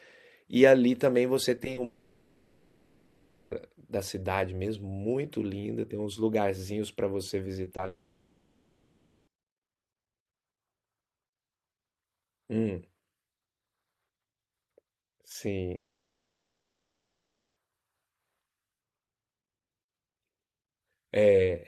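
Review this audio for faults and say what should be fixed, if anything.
Repeated packet loss (robotic sound) occurs from 1.57 to 1.78 s, with four gaps totalling 60 ms and none longer than 30 ms, so about 29% of that span is patched. It occurs again from 7.64 to 7.88 s, with seven gaps totalling 90 ms and none longer than 20 ms, so about 37% is patched. Each hole is filled by stretching the previous sound, which makes the audio choppy. Unlike a dropout, real audio keeps arriving between the holes. Deeper jitter buffering and forward error correction would prevent it.

Long network dropouts are the likely cause of three longer losses, at 1.84 to 3.52 s, 7.88 to 9.28 s and 15.75 to 17.57 s. In the first two, 1.67 s and 1.39 s are missing, and each gap is filled end to end with a synthetic continuation of the last sound, with no silence. The second follows directly on the second choppy stretch. 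In the third, 1.81 s is missing, and it falls to near silence after a brief tail. Unlike a natural pause, the audio resumes with the lost stretch simply gone. A more stable network path with redundancy or retransmission would prevent this.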